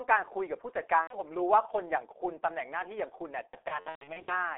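Throughout, the G.723.1 codec leaves the speech muffled and hoarse, with energy confined to about 300 Hz to 3.5 kHz on a spectrogram, which fits a narrowband 6.3 kbit/s codec. From 1.01 to 1.20 s, VoIP packet loss concealed by the speech codec replaces about 90 ms with a fading extrapolation that shows as smeared harmonics and a sagging envelope. From 3.47 to 4.41 s, heavier loss is scattered over about 810 ms, with runs up to 120 ms, producing repeated dropouts that appear as a patchy spectrogram and a weakened waveform.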